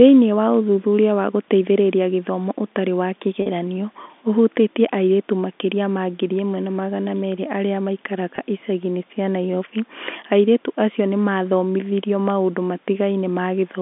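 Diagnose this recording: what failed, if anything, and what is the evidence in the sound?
The network stage failed, with packet loss with pitch repetition. At 3.42 s about 40 ms of audio is missing, which fits two lost 20 ms packets. At 8.36 s a 20 ms gap fits one lost packet. Both gaps are short, so neither fades to silence. Instead the receiver loops the last pitch period, and each spot sounds like a briefly held, slightly buzzy tone. The audio resumes cleanly afterward, inside the narrow telephone band of about 200 Hz to 3.6 kHz.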